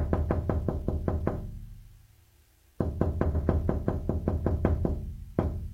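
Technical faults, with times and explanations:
3.30–3.39 s, repeated frames: a 92.9 ms block plays once more, consistent with two compressed frames written twice, so the sound stutters and runs 92.9 ms longer. The waveform and spectrogram show the same short pattern twice, back to back.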